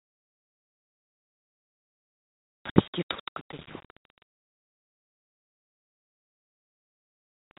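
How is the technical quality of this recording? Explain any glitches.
One glitch stands out: a short dropout at 2.70 to 2.76 s, a case of packet loss filled with silence. For 60 ms the audio simply stops and then resumes, with abrupt edges. The sound has been sent in fixed-length packets, and when some failed to arrive the receiver inserted digital silence instead of concealing the gap. A 60 ms hole is consistent with two consecutive 30 ms packets going missing. The sound itself sits in a narrow telephone band, as expected from G.711 coding, with a change in voice level around 3.0 s as the talker moves and some room noise.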